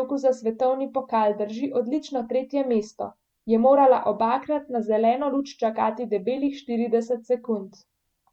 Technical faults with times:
none

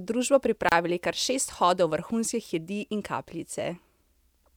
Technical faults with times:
0.69-0.72 gap at a join of encoded pieces

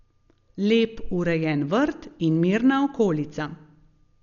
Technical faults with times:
0.00-4.22 Dolby Digital compression

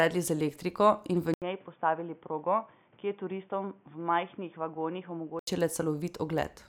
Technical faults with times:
1.34-5.47 input switched to a poorer device

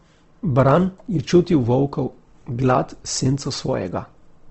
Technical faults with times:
0.00-4.51 Opus compression

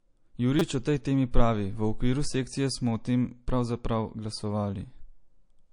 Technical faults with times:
0.00-5.73 MP3 compression
0.59 repeated buffer
1.32-1.34 pre-echo

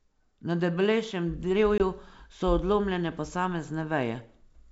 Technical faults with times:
1.78-1.81 packet loss on an ADPCM call

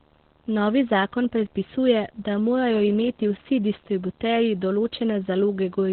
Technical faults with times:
0.00-5.92 video or display buzz
0.00-5.92 Opus voice compression

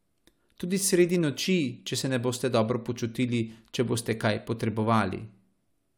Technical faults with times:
none

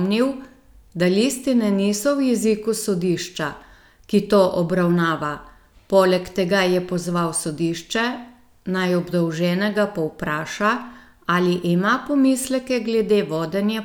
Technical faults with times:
none

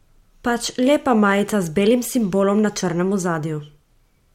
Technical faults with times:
none

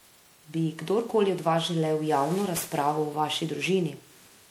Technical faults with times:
0.00-4.51 generation loss

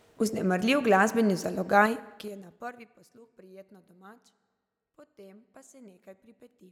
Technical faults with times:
1.79-2.99 zipper noise

